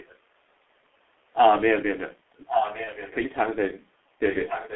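Throughout the speech, the sound is muffled and hoarse, with smeared consonants and nothing above about 3.5 kHz or below 300 Hz. This is heavy G.723.1 codec damage, consistent with its 6.3 kbit/s mode. Its slow-updating voice model and 30 ms frames blur fast detail.

From 0.00 to 0.17 s, a very faint trace of earlier-sounding speech sits underneath, well below the main voice. From 4.31 s to the end it returns much more clearly, only moderately quieter than the speech. Both are echo leak, a copy arriving about 1.12 s late, likely from a loudspeaker whose echo canceller let its own output back into the microphone.

From 2.84 to 2.92 s, the voice briefly stretches into a fading buzzy or noisy sound, then sounds weak or distorted before recovering. This is VoIP packet loss concealed by the speech codec, which fits one lost 30 ms frame. The decoder extended the previous pitch and filter at falling gain, and its frame-to-frame memory prolonged the damage past the gap.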